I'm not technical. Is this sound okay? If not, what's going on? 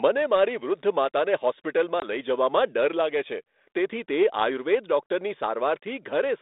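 No. At 2.0 to 2.05 s there is packet loss on an ADPCM call. About one chunk of the call went missing and the receiving phone briefly lost track of the sound's level, so a sharp gap of silence is followed by slight roughness.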